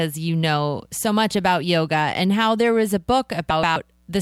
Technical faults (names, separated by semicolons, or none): frames out of order